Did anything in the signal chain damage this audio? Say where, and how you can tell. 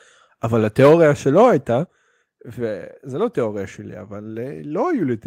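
Yes. At the converter stage there is microphone overload from 0.79 to 1.02 s. The speech peaks are driven about 6 dB past full scale, so several percent of samples have their tops flattened. That gives the loudest syllables a harsh, crackling edge, likely from input gain set too high.

In call processing, the microphone volume is stepped down twice: at 0.87 s by about 2 dB and at 1.86 s by about 6 dB. Voice and background fall together in a single abrupt step each time, which points likely to automatic input-gain control reacting to a microphone it found too loud or clipping.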